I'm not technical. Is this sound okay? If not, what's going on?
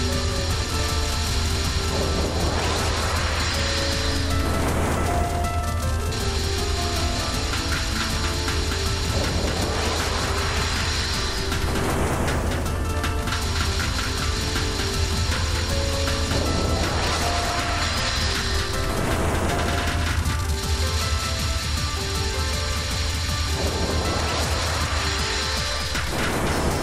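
No, not quite. The whole clip has what's called a doubled audio track: everything you hear is played a second time, about a fifth of a second later and a bit quieter, so it sounds like a clean, slightly late twin rather than a room echo. That most likely happens when the same sound gets picked up twice, once through a slower route, or when an edit leaves two copies sitting out of step.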